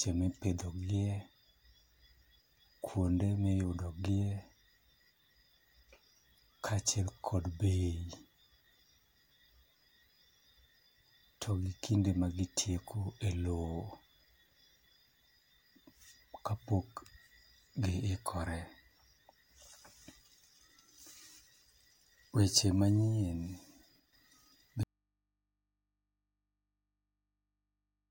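It's a speech clip, and the trouble is all near the end. At 24.0 s there's a sudden gain jump: the level drops by about 5 dB in one step, voice and background noise together, over roughly 24.0 to 24.13 s. There's no ramp at all, so it sounds like a gain setting or bit shift was most likely applied straight to the samples instead of being smoothed in. Then at 24.83 s you get an audio dropout to a faint residue. The speech cuts off mid-flow and never returns, right through to the end of the clip. What's left in the gap is mains hum sitting way down, something like 55 dB below the speech. That points to the source likely being lost while the input stayed open and live, so the path just carried on picking up hum instead of going properly silent.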